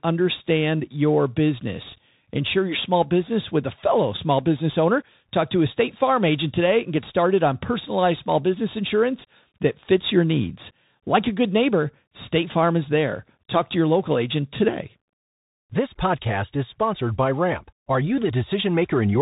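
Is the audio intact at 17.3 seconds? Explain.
No. From 16.94 to 17.5 s, just after "podcast is", the speech slows by 5.6% and drops about a semitone (100 cents) before snapping back to normal. This is likely a drift correction step, where clock-matching software briefly changed the playback rate to rebalance its buffer.

The Bluetooth CVSD headset codec also affects this moment, as it does the whole clip. Its one-bit, slope-tracking encoding cuts everything above 3.8 kHz, lays a granular hiss under the speech, and audibly roughens sibilants and loud high-frequency sounds.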